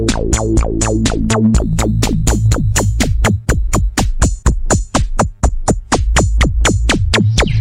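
From 1.58 to 4.08 s there is crude rate conversion. Samples were repeated to stretch the rate by a small ratio, which fits 44.1 kHz to 48 kHz, with no filtering. The error sits roughly 25 dB down, a gritty, inharmonic fizz following loud passages.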